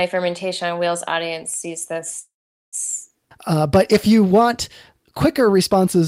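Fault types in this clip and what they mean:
Short stall from a late packet: One packet arrived after it was due, so the jitter buffer briefly ran dry and the receiver stretched the last sound. Just after "on wheels audience sees", around 1.93 to 1.97 s, a sound is held about 18 ms too long, with nothing lost.
Call audio freeze: Packets were likely held up in transit, emptying the jitter buffer. From 2.19 to 2.75 s the sound stops, fading into about 440 ms of silence, then resumes where it left off. That inserts roughly half a second of delay while little or nothing is missing.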